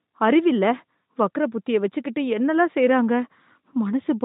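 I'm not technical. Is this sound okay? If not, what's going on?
Yes, this speech clip has no technical faults, and the limited range of ordinary mobile-phone audio is simply the phone system working as designed.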